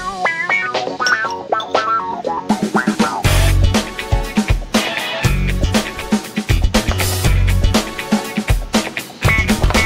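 Nothing goes wrong anywhere in the clip; there are no dropouts, glitches or other technical faults to point to at any moment.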